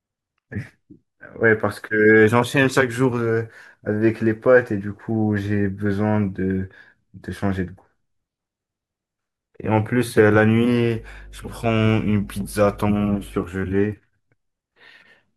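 A ground loop or nearby transformer couples the 50 Hz power line into the signal path between 10.96 and 13.44 s, producing mains hum: a steady, low 50 Hz drone sitting about 20 dB below the speech, audible beneath it for those two and a half seconds.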